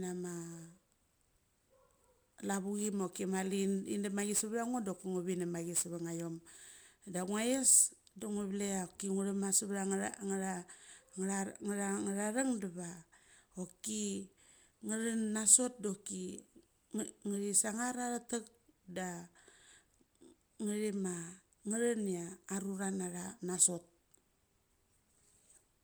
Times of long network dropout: none

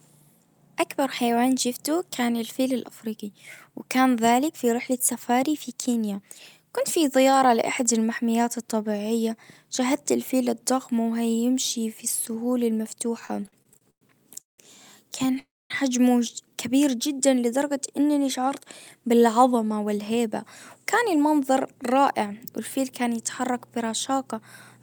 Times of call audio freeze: 15.39-15.71

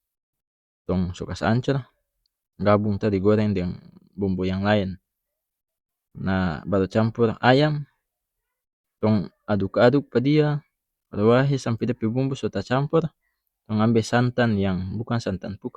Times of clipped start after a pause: none

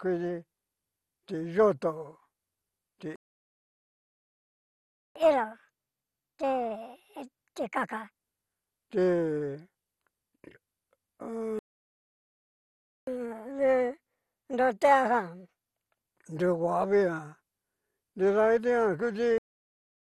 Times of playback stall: 3.16-5.16, 11.59-13.07, 19.38-20.03

